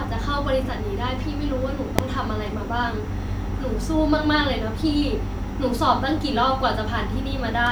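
This is a speech clip with invalid numbers at full scale. At 1.99 s there is a single sharp bang. A calculation has produced infinite or invalid values that were clamped to full scale. The burst lasts under a millisecond, which fits a 32-sample block. It is heard as one loud click rather than a pop, silence and pop.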